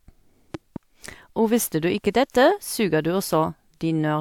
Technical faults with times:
0.54-0.78 loud pop

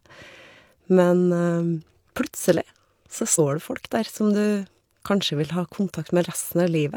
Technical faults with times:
3.35-3.39 compressed frames skipped

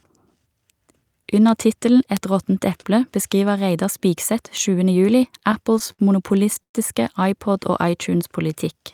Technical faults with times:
2.17 bit error spike
4.57 bit error spike
5.39-6.75 repeated stalls (stutter)
7.47-8.80 jitter buffer slow-down

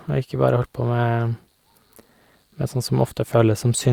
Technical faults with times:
none

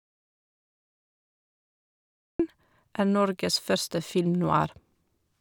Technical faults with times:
0.00-2.40 audio dropout to silence

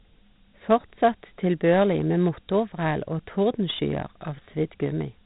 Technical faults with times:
0.00-5.25 Dialogic VOX ADPCM

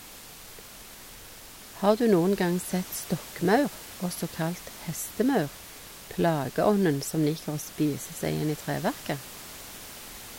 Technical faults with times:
none

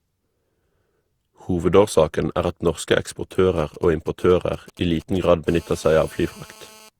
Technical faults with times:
0.00-6.99 generation loss
3.59-5.48 GSM signalling bursts
5.48-6.89 GSM phone buzz

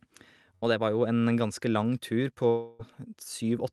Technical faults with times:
0.55-0.67 burst of packet loss
2.49-2.81 long network dropout

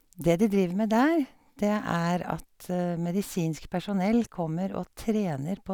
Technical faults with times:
0.00-5.74 sample clock jitter

